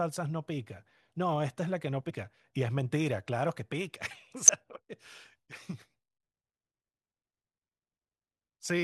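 At 2.09 s and 4.48 s, damaged data in a compressed stream causes brief blips. Corrupted frames throw the decoder out of sync until it finds the next header.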